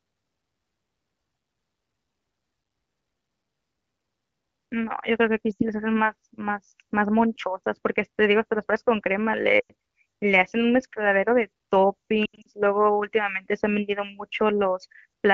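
Lost AMR speech frames hit at 5.52–5.63 s (about 80 ms), 9.60–9.72 s (about 100 ms), and 12.25–12.47 s, where gaps scatter across 200 ms with the longest run 80 ms. Failed frames make the wideband decoder reuse the last pitch with falling gain, giving a brief fade to near silence within two frames rather than a clean, abrupt cut.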